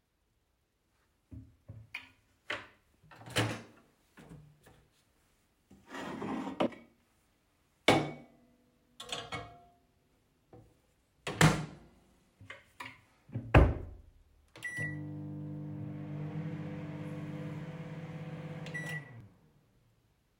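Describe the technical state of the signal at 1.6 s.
At 1.6 s the signal is intact, with no fault present at that moment.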